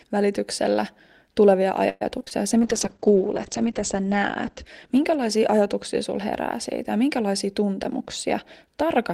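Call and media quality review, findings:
Repeated packet loss (robotic sound), 1.89–2.44 s, right after "välityksellä tulevia". Choppy stretch with pieces missing: four holes, roughly 40% concealed. Receiver stretched prior audio across 170 ms, 60 ms still dropped out, longest gap 113 ms. Network/receive path.

Call bitrate drop, 2.58–6.23 s. Sound turns rough and watery, top end gone. Audio band shrinks from 20 kHz to 8 kHz, worst for about 1.3 s. Fits Opus pushed from around 32 down to 9 kbps after the bandwidth estimate fell. Encoder/congestion control.

Jitter buffer speed-up, 7.45–8.90 s. Delivery sounds hurried at unchanged pitch, about 107% speed. Receiver trimmed pitch-period chunks, around a tenth of a second in total, to drain an overfull jitter buffer. Receive-side playout.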